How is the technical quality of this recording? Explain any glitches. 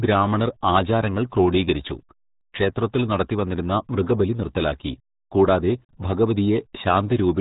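Poor, because heavy low-bitrate coding runs through the whole speech clip. RealAudio 14.4 codec, throughout: it squeezes the sound to a rate that fits an 8 kbit/s modem codec and cuts everything above 3.8 kHz, leaving speech muffled and gargly.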